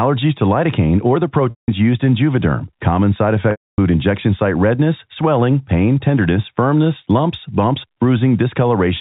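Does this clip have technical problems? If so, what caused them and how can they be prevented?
Yes, there are two spots of packet loss with pitch repetition. The first runs from 1.50 to 1.68 s, right after "to lidocaine or the" and before "used in." The second runs from 3.51 to 3.78 s, just before "injection site redness swelling." Both gaps, 180 ms and 270 ms, are much longer than the roughly 50 ms fade, so you get a brief buzzy held tone that dies into silence before the speech cross-fades back in. The G.711 telephone band underneath is intact. To prevent it, carry the call over a steadier link with forward error correction or redundant packets.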